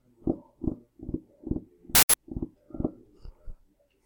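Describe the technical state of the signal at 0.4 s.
At 0.4 s the signal is intact, with no dropout, clipping, glitch or other fault audible at that moment.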